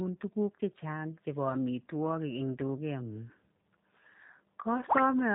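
Thin, boxy and faintly synthetic throughout, the speech has a rough, buzzy edge, and nothing is heard above about 3.8 kHz. That is plainly audible G.729 codec damage, consistent with the G.729A variant and its 8 kbit/s rate. The codec does not keep the waveform. It rebuilds the speech from a vocal tract filter, a pitch predictor and a few coded pulses per frame, which produces the coarse, artificial texture and the missing top end.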